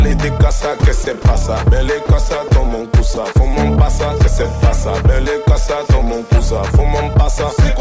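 Three brief gaps, at 1.04 to 1.07 s, 2.06 to 2.09 s and 3.14 to 3.17 s, replace the sound with 30 ms of flat, steady noise before it resumes. The likely cause is sound dropped by the voice detector: the sender judged those moments to be background and stopped transmitting, and the receiver filled each hole with comfort noise. Throughout, nothing reaches above 8 kHz, which fits a G.722 call path at around 64 kbps.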